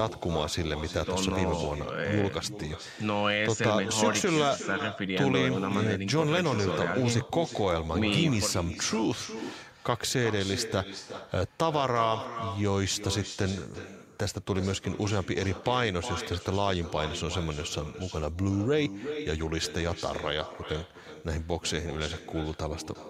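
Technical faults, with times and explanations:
Throughout, echo with no canceller: every phrase returns about 11 dB quieter, roughly 0.4 s later, thinner, picked up from the far loudspeaker.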